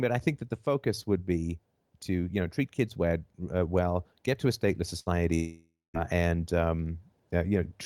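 A burst of packet loss at 4.99–5.13 s in this speech clip leaves about 60 ms missing, filled by continuing the last sound as it fades before the speech resumes further on. At 5.35–5.97 s, the last sound is held and fades away, then about 200 ms of silence follows and roughly 600 ms is gone, likely from a long network dropout.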